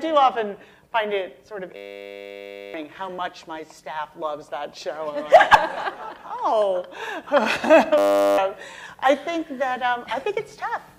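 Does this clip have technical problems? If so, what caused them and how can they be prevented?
Yes, there is a system hang loop from 1.76 to 2.74 s and from 7.98 to 8.38 s. The system froze while the hardware replayed one 10 ms buffer, giving a steady 100 Hz buzz in place of roughly a second and then about 0.4 s of audio. A waveform shows identical repeating 10 ms cycles, and a spectrogram shows flat harmonic lines at multiples of 100 Hz. Prevent it by keeping the audio thread responsive, with real-time priority and no blocking work, so the buffer is always refilled.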